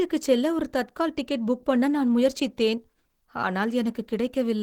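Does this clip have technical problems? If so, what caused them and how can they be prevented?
Yes. Throughout the speech, the sound is hoarse and muffled, with a grainy, rough texture on voiced sounds; the damage is plainly audible. The likely cause is Opus compression at a very low bitrate. The character fits the encoder running in its hybrid mode at around 16 kbps, where too few bits are left for the upper bands, so they are filled with noise rather than detail. To prevent it, encode at a higher bitrate or keep an uncompressed source for editing.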